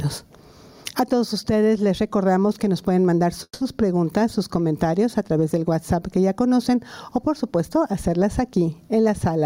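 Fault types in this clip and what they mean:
gain pumping: The input gain is very likely set far too high for the microphone, so a fast limiter or compressor drags the level down on every loud sound and releases it afterwards. Throughout the clip the level swings by roughly 15 dB. Loud and soft passages sit closer together than they should, and the whole sound comes across squashed.
call audio freeze: Packets were likely held up in transit until the receiver's jitter buffer ran dry. From 3.43 to 3.62 s the receiver keeps the last sound going as a fading buzz or hiss, filling about 170 ms, of which roughly 50 ms is silence. When the packets arrive the audio resumes where it stopped, so nothing is lost, but a 170 ms gap has been inserted and everything after it runs that much later.
jitter buffer speed-up: The jitter buffer was holding more audio than its target, so the receiver trimmed the backlog by cutting out short slices of one or a few pitch periods, over and over. 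From 8.98 s to the end the audio plays at about 107% speed with the pitch unchanged, which is fast enough to sound hurried. Around 40 ms of audio is taken out across that stretch.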